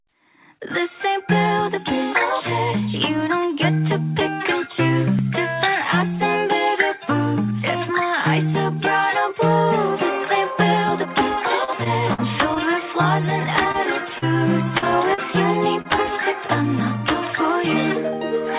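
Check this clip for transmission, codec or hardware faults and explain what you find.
Packet-loss damage runs from 11.64 to 15.88 s, set against a call path whose band stops at 4 kHz, which points to G.711 A-law at 64 kbps.

Repeated packet loss (robotic sound), 11.64–12.59 s: four gaps, the longest 46 ms, were patched by extending the preceding sound. That covers 117 ms in all, with 40 ms lost outright. It sounds choppy, with pieces missing. A spectrogram shows repeated smeared, flattened patches. The waveform shows looped cycles.

Short stall from a late packet, 13.72–13.77 s: the jitter buffer ran dry and the last sound was held for 23 ms until the packet arrived. Nothing is lost. The sound is briefly held, with a slight buzz or dip. On a spectrogram this is a short horizontal stretch.

Short concealed packet loss at 14.18, 14.78, 15.14 and 15.82 s: each hole lost 40 ms, and 31 to 41 ms of it was synthesised from the preceding sound before blending back into the real signal. 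Each one is a brief smear or wobble. A spectrogram shows a blurred notch at each point.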